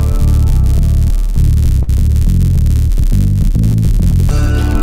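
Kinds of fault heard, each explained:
Filter restarted on every block: throughout, the filter restarts from silence each block, leaving small ticks that form a level-following buzz near 93.8 Hz, which fits a 512-sample block.
Clock drift between sender and receiver: throughout, the sender's clock runs roughly 3 percent slow, so the jitter buffer keeps draining, causing small, unevenly spaced timing hiccups.
Short stall from a late packet: at 1.83–1.89 s, a late packet emptied the buffer, so the last sound was held for 45 ms, with nothing lost.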